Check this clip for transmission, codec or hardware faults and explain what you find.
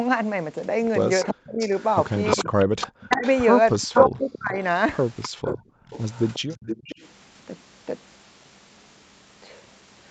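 Yes, there's a fair bit going on, all of it call-path echo-canceller trouble rather than codec or hardware problems.

Echo leak, 1.23 to 4.37 s and 5.22 to 7.08 s: a delayed copy of the speech comes back about 350 ms late, then about 358 ms. It's likely a loudspeaker-side echo canceller letting its mic pickup through. The first stretch is only a little quieter than the speech; the second sits noticeably lower.

Speech suppressed in double talk, 1.3 to 1.7 s, 2.37 to 3.25 s and 3.88 to 4.57 s: the talker's speech drops out in chunks, almost to silence at worst, for a good part of each window. Likely cause: the canceller couldn't separate the talker from the overlapping echo and ducked both.

Background gated by the echo canceller, 5.29 to 5.87 s: the room sound falls away by about 31 dB for a short while, then comes back. The canceller clamped the microphone down hard while the loudspeaker was playing and released it when it let go.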